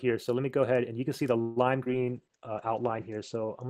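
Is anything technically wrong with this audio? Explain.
Yes. There are three separate call-transmission faults.

From 1.41 to 1.58 s, the sound stops moving forward. For about 148 ms the last sound is stretched into a fading buzz or hiss, with no true silence. Then the audio resumes exactly where it stopped, so nothing is lost, but everything after it arrives 148 ms later. This is a call audio freeze. The likely cause is packets held up in transit, so the jitter buffer ran dry.

At 1.84 to 1.88 s there is a brief smear or wobble. This is short concealed packet loss. About 20 ms of audio never reached the decoder in time. The receiver covered the hole by extending the preceding sound for about 16 ms, then blended back into the real signal. The original content of that short slice is gone.

From 2.08 s to the end, the sound turns rough and muffled. This is a call bitrate drop. The encoder's budget fell from 48 kbps to 10 kbps, and it held near the lowest rate for about 1.01 s. 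The coding became much coarser. The audio bandwidth also shrank from 20 kHz to 8 kHz, cutting off the highs. It does not recover before the clip ends.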